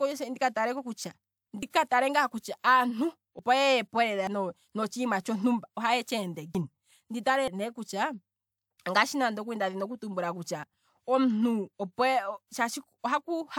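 Small forward skips in the speech occur at 1.63, 3.39, 4.27, 6.55, 7.48, 8.78 and 10.64 s, likely a dropped buffer (overrun): roughly 50 ms is lost at most points, nearer 100 ms at 7.48 and 8.78 s and about 150 ms at 6.55 s. The two sides are butted together without any gap. On a waveform each shows as an abrupt discontinuity, and on a spectrogram as a thin vertical broadband line where the harmonics jump.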